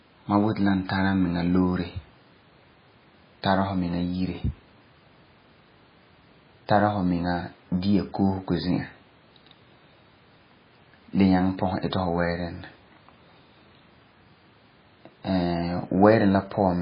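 The speech sounds dull and watery from start to finish, with swirling, warbling detail and smeared consonants, and nothing above 5 kHz. That points to heavy MP3 compression, likely at a very low bitrate around 16 kbps, where the encoder cuts the treble and lets weak components drop in and out.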